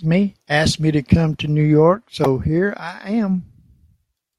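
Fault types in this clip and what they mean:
Damaged data in a compressed stream: a stretch of the encoded speech stream arrived corrupted, with bytes lost, zeroed or overwritten, so the decoder could not read the affected frame correctly, lost its place and had to hunt for the next valid frame header before decoding resumed. In the sound this comes through as a brief chirp or blip from about 2.24 to 2.26 s, a 22 ms break in the speech.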